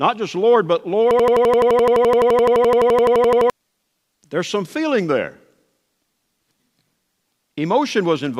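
Speech, hit by a system hang loop from 1.11 to 3.50 s: the system froze and the hardware replayed one 85 ms buffer, giving an 11.7 Hz machine-gun stutter.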